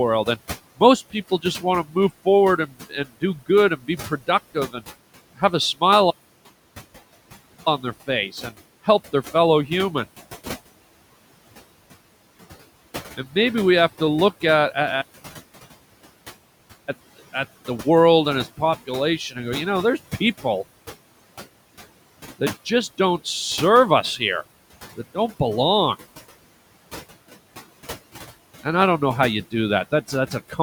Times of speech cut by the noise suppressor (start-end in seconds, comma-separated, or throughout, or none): 0.78-2.26, 2.57-4.76, 5.36-5.82